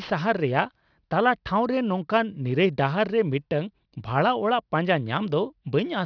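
Aliasing runs through the whole speech: the spectrum stops abruptly at about 5.5 kHz, which fits a drop to an 11 kHz rate without proper filtering. Higher energy folds back as faint, metallic grit roughly 30 dB down on sibilants, whereas plain band-limiting would only dull them.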